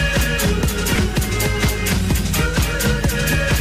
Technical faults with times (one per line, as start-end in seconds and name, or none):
0.00-3.61 doubled audio track
0.95-0.97 skip ahead